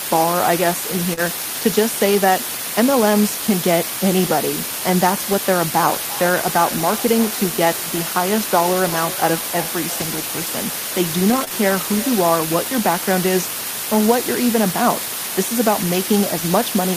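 A loud, even hiss runs under the whole speech recording, almost as strong as the voice itself. This is low bit depth with dither: the audio was reduced to about 4 bits, with dither turning the rounding error into steady white noise rather than distortion. At 1.13 to 1.19 s, and again at 11.44 to 11.52 s, there are brief smears where the sound is stretched forward. These are short concealed packet loss, where the receiver filled roughly 40 ms of missing audio by continuing the previous sound and then blending back into the real signal. Short rough, noisy patches also occur at 1.17 to 1.19 s, 10.00 to 10.02 s and 11.28 to 11.42 s. Each is lost audio rebuilt from error correction, played from the lower-bitrate copy carried in the following packet. The last of these patches is longer, which points to several packets being rebuilt.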